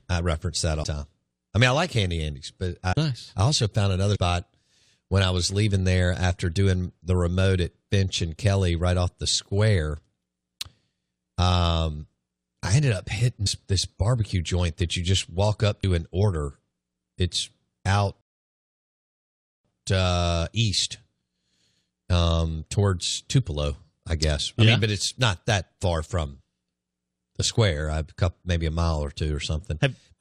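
At 0.83 s the speech jumps ahead with a short smeared blip rather than a click, losing about a fifth of a second. The same skip recurs at 2.91 to 2.94 s and 4.15 to 4.17 s (about 150 ms each), then at 13.46 s and 15.83 s (about 100 ms each). These are compressed frames skipped. The decoder never played whole blocks, each about 23.2 ms long, and the overlap between neighbouring frames blurs each join.

From 18.21 s to 19.65 s the speech cuts to silence for about 1.44 s, then resumes. This is a playback stall, likely caused by the player running out of buffered data or its output thread being held up until it recovered.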